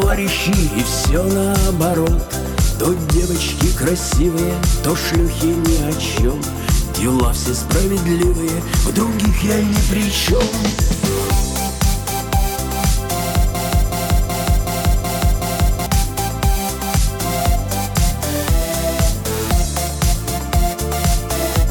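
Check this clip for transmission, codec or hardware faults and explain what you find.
One fault turns up, a broken-record loop from 13.55 s to 15.86 s. A fragment about 374 ms long repeats exactly six times back to back, giving a rhythmic stutter, and whatever audio belonged in that stretch is missing. The likely cause is a stalled player, encoder or stream that kept resending the last fragment it held. On a waveform or spectrogram the same 374 ms pattern tiles identically across the span.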